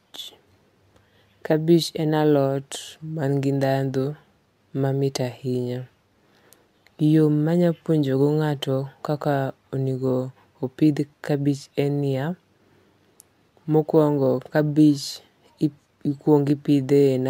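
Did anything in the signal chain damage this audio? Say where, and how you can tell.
Yes. Crude rate conversion at the resampling stage throughout: gritty, inharmonic fizz around 30 dB below the speech, from sample repeating. That fits an unfiltered 3:2 step from 32 to 48 kHz.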